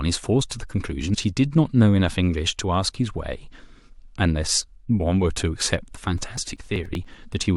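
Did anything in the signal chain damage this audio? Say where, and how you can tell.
Yes. At the codec stage, the speech jumps forward at 1.13 s and 4.99 s. These are compressed frames skipped: around five 21.3 ms frames, roughly a tenth of a second of audio, never reach the output.

At the driver or buffer stage, from 6.18 s to 7.43 s, there are periodic USB or driver dropouts. About fifteen brief losses of roughly 4 ms are skipped, one every 96 ms. They are heard as evenly spaced ticks, pointing to a background task stalling the audio path.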